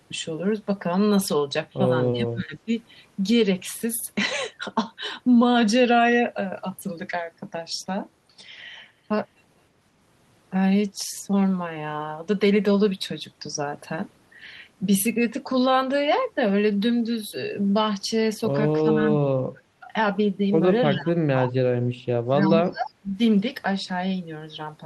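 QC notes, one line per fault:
2.12–2.72 s, 18.82–19.93 s, 20.93–21.53 s, 21.98–22.02 s and 22.45–23.17 s: speech suppressed in double talk. The speech is pulled down hard, by roughly 20 to 35 dB at its deepest, with the last four events bunched close together. The likely cause is an echo canceller treating overlapping far-end talk as echo and attenuating the near talker along with it.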